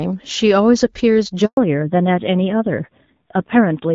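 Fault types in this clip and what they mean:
handover gap: The call was passed between networks and no speech frames arrived during the switch, so the speech cuts out abruptly at 1.45 s and stays silent for about 120 ms until the new link picks up at 1.57 s, losing whatever fell inside.
fallback to narrowband: After the handover the call dropped from HD Voice to a narrowband codec, with sound that fits AMR-NB at 7.4 kbit/s. From 1.57 s to the end nothing above 4 kHz remains, and the speech turns duller and rougher than before.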